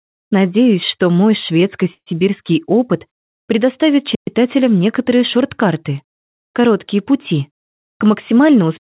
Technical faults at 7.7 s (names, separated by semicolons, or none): jitter buffer speed-up